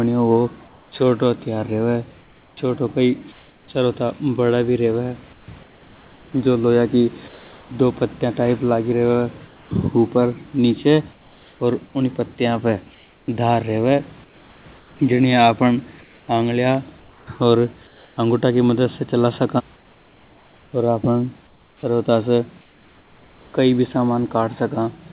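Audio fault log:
0.68–3.68 s, 5.33–7.70 s, 9.47–9.71 s, 11.12–11.60 s, 12.95–18.17 s, 19.76–23.54 s: comfort noise in place of the background. In pauses the room's textured hiss turns into smooth, even noise lasting 0.96, 1.26, 0.24, 0.48, 1.8 and 2.25 s, about 3 dB quieter at 9.47 and 11.12 s. The likely cause is that the sender stopped transmitting during silence and the receiver synthesised filler. A spectrogram shows uniform, featureless patches, capped at 4 kHz like the call audio. The waveform shows a flat, steady floor.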